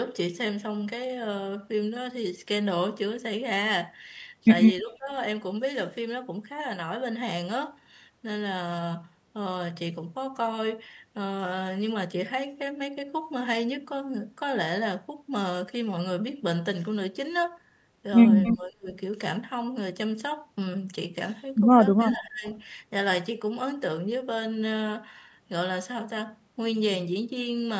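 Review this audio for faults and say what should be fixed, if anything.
Speech suppressed in double talk shows up at 4.81–5.09 s, 18.53–18.89 s and 21.96–22.45 s. The speech dips by about 15, 35 and 20 dB. It's likely the echo canceller on the loudspeaker side ducking everything while both sides talk over each other. Better double-talk detection in the canceller would fix this.

Echo leak appears at 18.44–18.57 s, 22.08–22.14 s and 22.48–22.55 s as a delayed copy, about 10 dB down for the first two and barely there for the third. The delays are 270 ms and 317 ms, so it's likely loudspeaker pickup the canceller didn't fully cancel. A headset or better acoustic echo cancellation would stop it.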